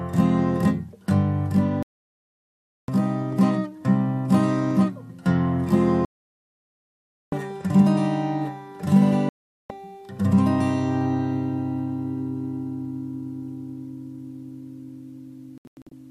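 Digital broadcast dropouts mute the sound at 1.83–2.89 s, 6.05–7.33 s and 9.29–9.71 s. The receiver lost good frames, so that audio is gone. At 15.58–15.92 s, short holes scatter, the longest about 96 ms.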